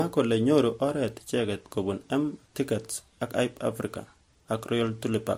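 Speech with artefacts of transcoding between lossy codecs throughout. Two kinds of codec artefact overlap, and the band stops at 16.7 kHz, which points to an MP3 encode likely re-encoded as Vorbis. A single codec would show only one kind of artefact.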